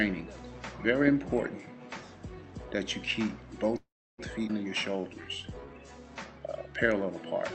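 At 3.77 s the sound stops moving forward. The last instant is stretched into a brief buzzy tail that fades, then there is roughly 0.3 s of silence before the audio resumes at 4.20 s from exactly where it left off. Nothing is lost, but about 0.41 s of dead time has been inserted. This is a call audio freeze. The likely cause is packets held up in transit, so the jitter buffer ran dry and the receiver could only extend and then fade the last sound until the delayed packets arrived.

Shortly after, between 4.48 and 4.51 s, the audio jumps forward abruptly. The gap is almost nothing, about 9 ms, but roughly 150 ms of material is simply absent, and the sound on either side is butted together. This is a skip ahead: a stretch of audio was dropped while later audio was already queued, possibly the buffer shedding the backlog that built up during the freeze, so playback jumps straight to the newer material.

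From 4.92 to 5.74 s the audio drags. It plays at about 85% of normal speed with unchanged pitch, so sounds are drawn out. This is a jitter buffer slow-down. With its reserve low, the receiver repeated individual pitch periods and fragments of pauses over and over, adding about 128 ms to rebuild its cushion. The whole clip also passes through an Opus call path limited to 8 kHz bandwidth, which accounts for the dulled top end.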